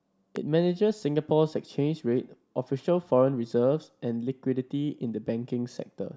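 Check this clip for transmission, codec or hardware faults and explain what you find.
One hardware fault is audible: a single loud pop near the start of the speech. It runs from 0.36 to 0.38 s. It peaks at roughly 5 dB above the speech around it. The likely cause is a sudden voltage step or spike, such as from a plug, a switch, static or a driver glitch. The downstream circuitry shapes that step into a brief pulse. It is heard as one sharp pop, and the speech continues underneath it.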